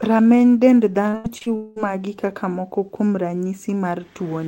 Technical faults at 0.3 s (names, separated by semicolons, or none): none